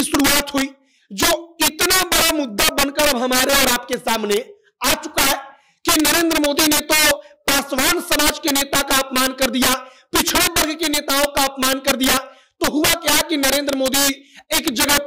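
All the way through, there's integer overflow: the level sits about 10 dB too hot, so a few percent of peaks wrap to the opposite sign, giving harsh cracks on loud moments.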